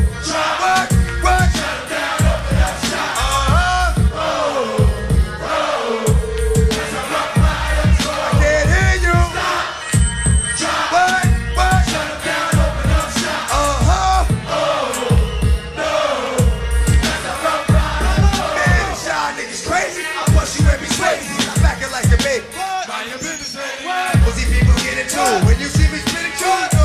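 No technical faults can be heard anywhere in the clip.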